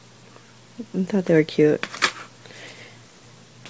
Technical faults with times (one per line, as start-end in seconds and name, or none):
none